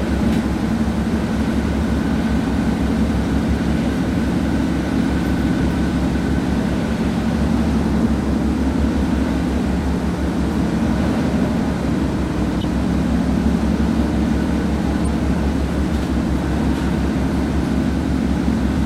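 At 12.61–12.64 s and again at 15.04–15.08 s, a corrupt frame decoded: damaged bits across a few compressed frames were played anyway, throwing energy to wrong frequencies. Each is a brief, fairly loud glitch, lasting several frames, unlike a single-sample click or a silent dropout.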